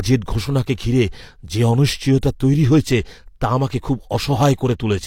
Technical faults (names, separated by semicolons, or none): pre-echo